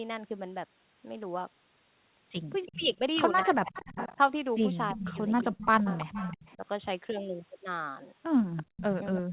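From 2.66 to 6.55 s there's an echo leak: a copy of the speech trails about 335 ms behind at roughly 10 dB down, most likely loudspeaker sound the far-end echo canceller didn't fully remove. Overlapping it, from 2.68 to 6.65 s, the main speech dips by up to around 25 dB for about a second and a half in total. That's speech suppressed in double talk, likely the canceller ducking everything while both sides talk at once. The echo leak comes back at 8.56 s and runs to the end, a bit quieter at around 15 dB down. Between 8.63 and 8.76 s the background is gated by the echo canceller, with the room sound dropping out by about 30 dB for a fraction of a second. Then from 9.12 to 9.31 s there's another short double-talk dip, roughly 40 dB deep and lasting around a tenth of a second.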